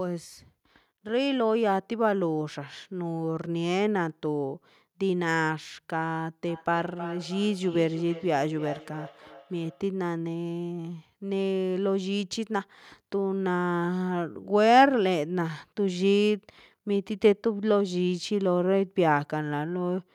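From 6.48 to 9.88 s, feedback echo between two devices: a second device replays this microphone's sound, which is picked up again, returning every third of a second or so at about 15 dB below the speech. On a spectrogram, faint, thinner copies trail each syllable.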